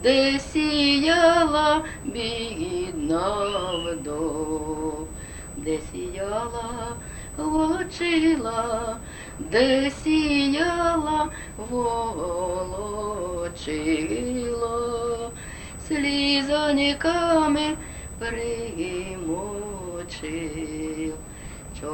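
A thin, steady whine at 8 kHz sits under the sound from start to finish, never changing pitch, roughly 20 dB below the main signal. This is USB whine: the bus pulls current in bursts every 125 microseconds, one per microframe, and that regular draw leaks into the audio through a shared power or ground connection, leaving a fixed tone at exactly the microframe rate.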